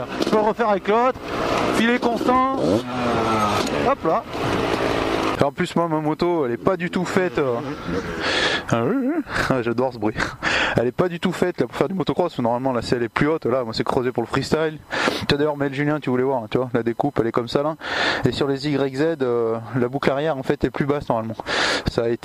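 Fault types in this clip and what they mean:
USB whine: a steady 1 kHz tone runs through the whole clip, roughly 40 dB below the signal. It fits current drawn in 1 ms USB frames leaking in through power or ground. A spectrogram shows an unbroken horizontal line at 1 kHz across all frames.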